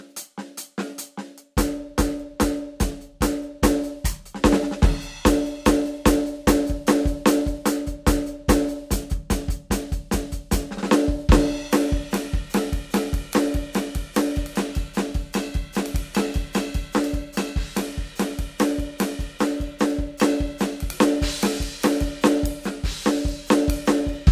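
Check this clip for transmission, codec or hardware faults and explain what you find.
No transmission, codec or hardware faults are audible anywhere in this music clip.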